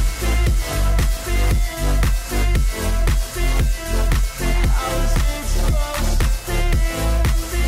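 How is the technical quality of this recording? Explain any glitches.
The technical quality of this recording is sound, with no glitches to explain.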